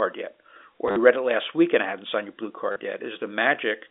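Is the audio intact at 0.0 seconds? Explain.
Yes, the audio is intact at 0.0 seconds, with nothing amiss beyond the narrow 300 Hz to 3.6 kHz band of the G.711 telephone line it was carried on.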